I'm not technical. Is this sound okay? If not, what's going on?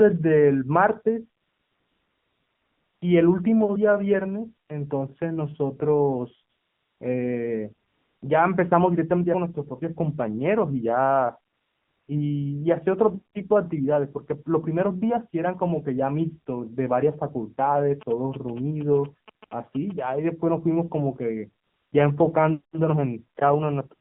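No. Two things are going on, both from a mobile phone connection.

The first is the AMR narrowband mobile codec, an old phone-call format, used for the whole 24 seconds. It keeps only a narrow slice of sound, roughly from 150 Hz up to 3.5 kHz. So the speech sounds thin and muffled, like a phone call. The format squeezes speech hard. That leaves a plainly buzzy, artificial quality.

The second is AMR comfort noise. During pauses, the phone stopped sending real sound. The receiving end filled the gap with smooth fake background hiss. You can hear this from 1.42 to 3.02 s, 4.68 to 4.70 s, 6.50 to 7.00 s, 7.88 to 8.22 s, 11.54 to 12.08 s and 21.64 to 21.92 s. At those moments the real background disappears. A steady hiss switches in and out instead.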